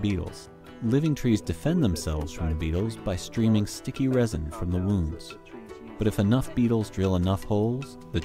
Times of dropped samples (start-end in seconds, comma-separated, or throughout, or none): 3.40, 6.81